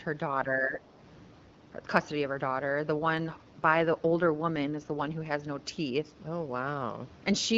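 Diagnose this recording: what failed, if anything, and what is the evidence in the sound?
Speech suppressed in double talk shows up at call-processing stage between 0.45 and 0.82 s, where the speech sinks by about 10 dB for a little under half a second. On a waveform the envelope pinches in over that stretch; on a spectrogram the whole band dims. The likely cause is an echo canceller that heard both ends at once, could not tell local speech from loudspeaker echo, and attenuated everything.

An AMR rate drop, a codec and network fault, runs from 2.94 to 5.40 s. The speech turns grainier and more synthetic, then clears again. The bandwidth stays the same and there is no dropout, which fits the link stepping the AMR-WB coder down from 12.65 to 8.85 kbit/s to free bits for error protection. A spectrogram keeps the same top edge but shows smeared harmonics and a noisier fill between them. Outside that span the 12.65 kbit/s coding gives only light damage.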